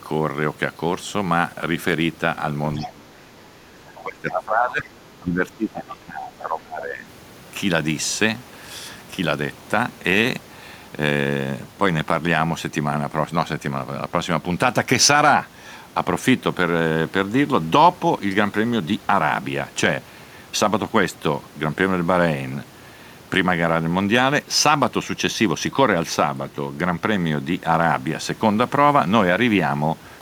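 From 2.78 to 7.05 s, the echo canceller likely could not separate the near talker from the loudspeaker echo while both sides spoke at once. It turned everything down, so the speech is suppressed in double talk, dipping by as much as about 20 dB and thinning or breaking up over roughly four seconds.

Within that stretch, the same incomplete echo cancellation likely lets the other side's voice leak through in two brief scraps. The first, at 2.80 to 2.87 s, sits about 15 dB below the talker. The second, at 3.96 to 4.01 s, is fainter at about 25 dB down.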